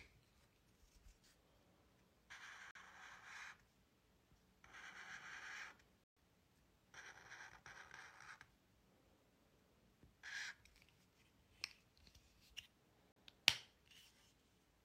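Everyday sound that mutes abruptly three times, at 2.71 to 2.78 s, 6.04 to 6.17 s and 13.12 to 13.16 s. This is a digital broadcast dropout: the receiver silenced corrupted frames, with gap lengths fitting one, three and one lost frame of about 43 ms each.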